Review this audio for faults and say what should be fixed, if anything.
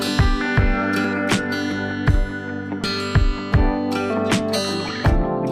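Jumps in the sound occur at 1.05 s, 2.84 s and 4.89 s, each time with no gap of silence. The sound skips ahead by roughly 40 ms, 70 ms and 20 ms respectively, which points to a likely dropped buffer (overrun): the capture program fell behind, the hardware overwrote unread samples, and the surviving audio on either side was spliced together. Prevent this by enlarging the capture buffer and giving the recording thread higher scheduling priority.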